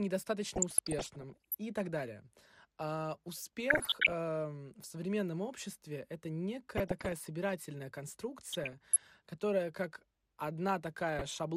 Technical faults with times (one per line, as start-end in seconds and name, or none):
0.00-11.56 MP2 compression
0.56-1.55 DAB burbling
3.70-4.14 DAB burbling
6.77-7.27 DAB burbling
8.51-8.98 DAB burbling
11.19-11.36 DAB burbling